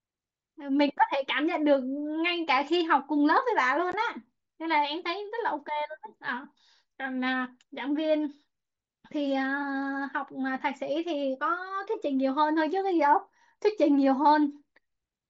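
At 3.92 s the speech has a single dropout from unconcealed Bluetooth headset packet loss. About 15 ms of audio, which fits two lost headset packets, never reached the phone, and silence or an idle pattern filled the gap with no concealment. It is heard as a brief tick or hole. On the waveform the signal breaks off abruptly and then resumes. On the spectrogram it shows as a thin vertical gap across the band up to 8 kHz, the limit of the mSBC wideband link.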